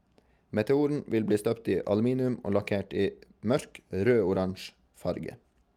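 Listening through the speech recording turns up no technical faults. There is nothing here to place on a timeline or trace back to a cause.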